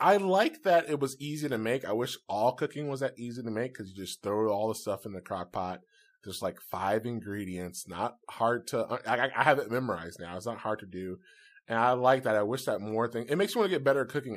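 Nothing goes wrong anywhere in this speech recording, so there's no technical fault to point to at any moment along the way.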